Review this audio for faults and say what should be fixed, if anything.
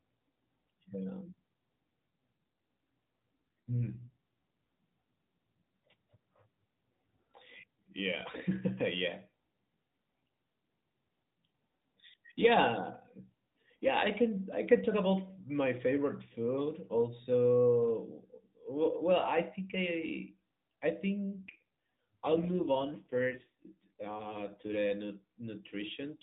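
An AMR rate drop occurs at 3.68–4.08 s and 21.18–24.77 s, just after "I think I I". The bandwidth stays the same and there is no gap, but the speech turns buzzier and more synthetic. That fits a fall from 12.2 to 5.9 kbps, with bits traded for error protection. A stronger radio signal would prevent it.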